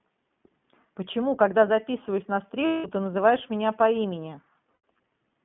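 Throughout, the speech carries plainly audible iLBC codec damage. Everything sits in a narrow line band of roughly 150 Hz to 3.4 kHz, so a spectrogram shows a hard ceiling with nothing above 3.4 kHz and little energy at the very bottom. Each short block of excitation is coded on its own, which fits 20 ms frames at about 15 kbps, and that gives the voice a faintly rough, synthetic edge rather than smooth continuity.

Lost iLBC frames then interrupt the audio twice, from 2.66 to 2.86 s and from 4.72 to 4.76 s. Packets went missing, so the decoder filled each hole by repeating the last pitch cycle blended with noise and fading it down. Each gap therefore sounds like a held, slightly buzzy vowel. On a spectrogram it shows as flat, smeared harmonic bands with no formant movement, and the waveform shows a repeating, decaying cycle. Because each frame decodes independently, the voice returns cleanly almost immediately after both gaps.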